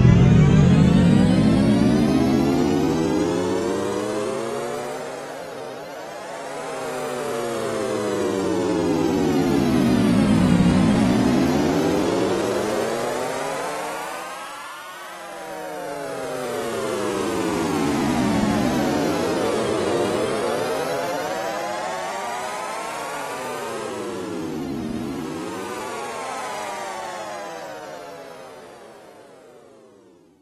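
A recording of sounds with one brief glitch at 21.27 s where the audio lurches forward slightly. It is a case of compressed frames skipped: a single compressed frame, 26.1 ms long, was lost or rejected by the decoder, so that sliver of sound never plays.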